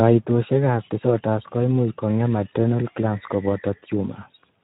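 Speex codec damage, present throughout the whole clip. The speech has passed through Speex, a CELP codec from older VoIP and game chat, and the degradation fits a low bitrate of around 11 kbps. At that rate the codec has too few bits to describe the excitation signal driving its vocal-tract filter, so fine detail is replaced by coarse approximations. The result is plainly audible: the speech sounds noisy and hoarse.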